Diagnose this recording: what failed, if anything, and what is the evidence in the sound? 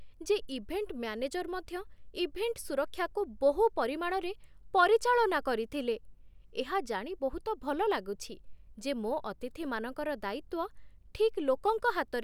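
Nothing stood out on listening to this speech recording; no stage in the chain gave any audible sign of failure.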